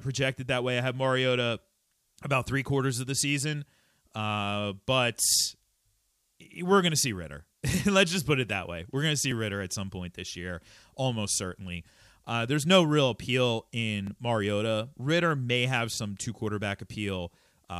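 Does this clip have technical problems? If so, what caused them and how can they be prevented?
Yes. Tiny skips forward at 9.31 s and 14.07 s, each losing a millisecond or two of speech, are likely dropped buffers (overrun). To prevent this, use larger capture buffers and give the audio thread higher priority.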